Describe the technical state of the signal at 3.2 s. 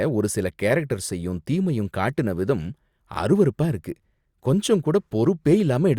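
At 3.2 s the speech signal is intact, with no audible dropout, clipping, distortion or other technical fault.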